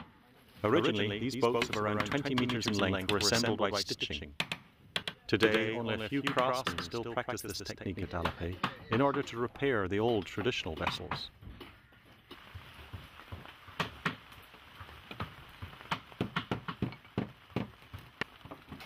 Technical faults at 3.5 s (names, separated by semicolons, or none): doubled audio track